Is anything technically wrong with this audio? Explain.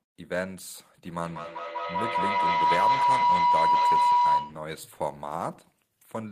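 Yes, there's a feedback howl from 1.05 s to 4.75 s. It sounds like two devices in the same room on one call, so the sound keeps looping from speaker back into mic and getting louder on each pass instead of dying away. It narrows to a tone around 1 kHz, pulses roughly every fifth of a second with the loop delay, and peaks about 9 dB above the speech before it's cut off.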